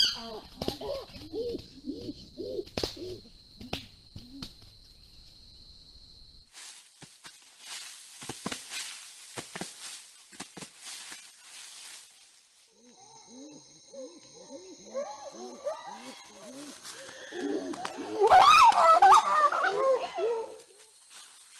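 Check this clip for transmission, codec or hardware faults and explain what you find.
There's one fault, a call bitrate drop from 1.62 to 4.93 s. The encoder apparently fell from roughly 48 to 18 kbps, so the audio goes coarse and muffled, bottoming out for about 1.5 s.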